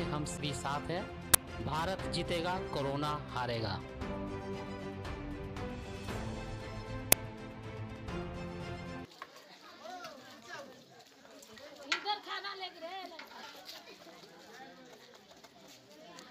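Two kinds of fault interrupt this audio. Damaged data in a compressed stream shows up four times, at 0.37, 3.83, 7.90 and 13.42 s. At each point corrupted bytes leave the decoder unable to parse a frame, so it loses sync and skips ahead to the next valid header. Each event is a brief chirp or blip of roughly 15 to 18 ms. An uninitialised buffer appears twice. At 1.34 s a block of about 10 ms, and at 7.12 s one of about 5 ms, reached the output before any real samples had been written to it. Whatever stale values were still in memory played back as audio, heard as short, loud cracks.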